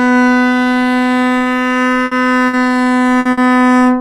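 A recording of everyday sounds with four bursts of packet loss, at 2.05, 2.47, 3.19 and 3.31 s. Each time about 60 ms of sound is stretched and faded as a buzz or hiss, then playback jumps ahead, skipping roughly 60 ms. On a spectrogram, smeared, fading bands end in abrupt discontinuities.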